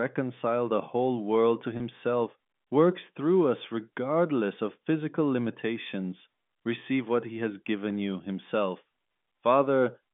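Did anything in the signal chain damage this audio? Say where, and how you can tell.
Yes. At the network stage there's packet loss with pitch repetition at 1.77 s, running to 1.80 s. A 30 ms gap, which fits a single lost packet, got bridged by repeating the last pitch period, so you hear a brief held, slightly buzzy note.

Later, between 7.23 and 8.35 s, there are CD scratch ticks from the disc source: six regular clicks, roughly five a second, each a couple of milliseconds at most. A blemish beat the error correction once per revolution, and the player patched over the bad samples. The telephone-band G.711 line, capped around 3.5 kHz, sits underneath all this.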